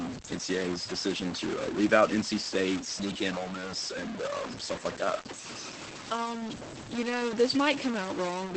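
From start to finish the speech carries an added distortion, and the pauses don't go quiet. They fill with a gritty noise floor instead. That combination points to a stuck bit, most likely one converter or data line pinned at a fixed value. About half the samples then land off by that bit's weight, which roughens the waveform, and small values near silence keep flipping around it, so the gaps hiss.

Layered on top, for the whole clip, is Opus voice compression doing plainly audible damage. The band stops around 8.5 kHz, so there's no air or sibilant sparkle above that, and the speech comes across muffled and a bit hoarse, with a slightly robotic edge from the coarse excitation coding. That sound fits the SILK speech coder in wideband mode at a low rate, something like 12 kbps with 20 ms frames.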